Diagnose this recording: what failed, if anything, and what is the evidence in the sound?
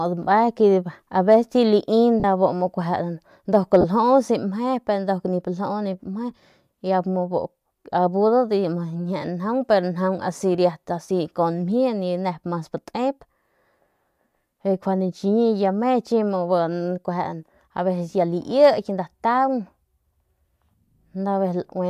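Lost LE Audio frames on the Bluetooth link are the failure, with concealment in the decoder. The speech breaks into a brief noisy smear at 2.20 to 2.25 s (40 ms, which fits four 10 ms frames) and at 3.81 to 3.85 s (30 ms, about three frames). The decoder repeats the last spectrum with randomised signs. On a spectrogram, harmonics blur into a diffuse wash. The waveform loses periodicity there. The light, faintly grainy top end is likely from the LC3 coding.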